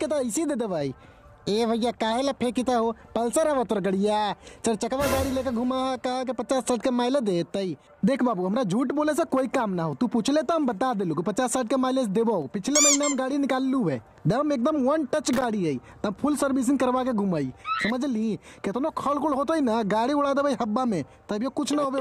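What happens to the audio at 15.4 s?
At 15.4 s there is a burst of loose connector crackle, running from about 15.33 to 15.44 s. A worn or dirty contact in the signal path is making and breaking in rapid succession, so the audio is chopped on and off. Unlike a clean digital dropout, which is a single tidy gap, this sounds ragged and scratchy, with irregularly spaced crackles packed into roughly a tenth of a second.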